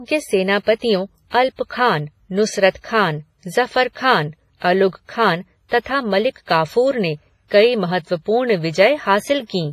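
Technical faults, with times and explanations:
Throughout: WMA compression. The speech sounds washy and ringing, with hiss that swells and fades with each syllable. Nothing remains above 15.5 kHz. Heavy damage like this likely comes from an early WMA encoder at a low bitrate, around 24 kbps, where quiet detail is discarded.
0.63–0.67 s, 1.28–1.33 s, 2.70–2.75 s, 4.57–4.62 s and 5.69–5.72 s: pre-echo. A short hiss of 30 to 46 ms leads each sharp onset, so the attack sounds smeared. One comes just before "खान ज़फ़र ख़ान" and another just after it. The coder spread noise over its whole block, into the quiet moment before the loud sound.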